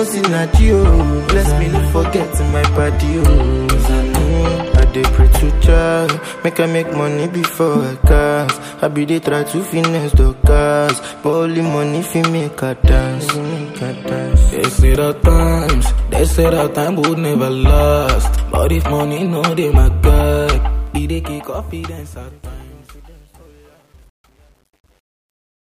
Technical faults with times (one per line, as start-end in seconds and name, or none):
20.56-25.60 truncation distortion on a fade